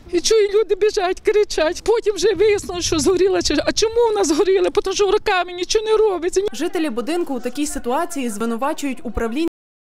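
At 0.93 s and again at 8.41 s the sound jumps ahead by around 10 ms, likely a dropped buffer (overrun) skipping a chunk. Then at 9.48 s the audio is cut off at the end, dropping straight to digital silence mid-sound with no decay.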